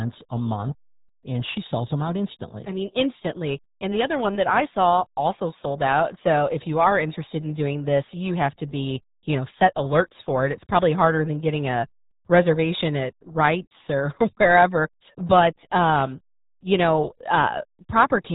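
The whole clip runs through the RealAudio 14.4 codec: speech is muffled and gargly, nothing above 3.8 kHz, which fits an 8 kbit/s dial-up-era stream.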